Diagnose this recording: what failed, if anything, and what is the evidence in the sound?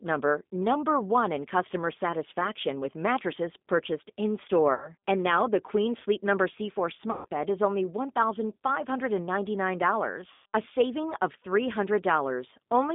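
At the codec stage, the speech passed through G.729 at 8 kbit/s. Nothing above about 3.6 kHz or below 200 Hz survives, and the voice is rebuilt from a vocal-tract filter, pitch predictor and a few pulses per frame. The result is plainly rough and synthetic throughout.

On the network, packets were dropped and the decoder filled the gaps with VoIP packet loss concealment, extrapolating its last pitch and filter while fading the gain. This happens at 4.74–4.89 s (about 80 ms lost), 7.11–7.26 s before "bed is only" and 10.32–10.46 s before "a saving of" (about 140 ms each), fitting roughly four and seven packets. Each gap becomes a buzzy tone or coloured noise that fades, and the following speech stays weak briefly.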